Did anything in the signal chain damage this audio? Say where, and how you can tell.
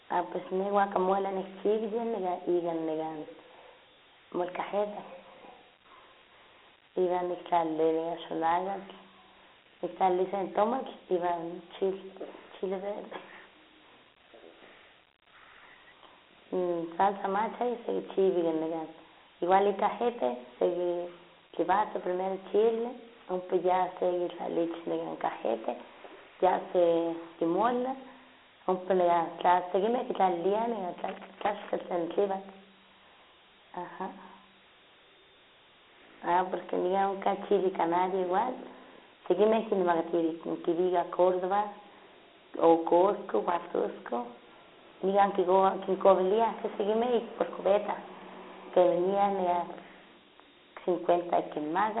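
Yes. The damage sits at two stages. The first is the codec, which is Dialogic VOX ADPCM. It runs through the whole clip. The speech carries a gritty hiss that tracks the voice, and that hiss is plainly audible. Nothing is heard above about 3.9 kHz, and the band is shaped like a phone line, from 300 Hz to 3.4 kHz. The 4-bit coder steps coarsely between samples, which leaves quantisation grit. The grit fits a 32 kbps VOX stream.

The second stage is analogue wiring, where there is loose connector crackle. There are two bursts. The first runs from 30.98 to 31.84 s, right after "tla sekinmeh kitlaliliah". The second runs from 43.50 to 43.67 s, after "o cosco". Each burst is a ragged scratch, not a clean click. A worn contact makes and breaks the circuit rapidly, and that chops the signal. The irregular timing points to physical movement, not to a digital fault.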